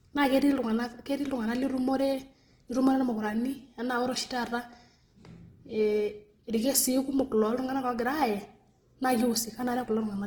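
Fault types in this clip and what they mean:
Opus compression: plainly audible grainy, rough speech throughout as band-filling noise replaces detail, likely from CELT-mode coding near 16 kbps, with content still reaching 20.1 kHz.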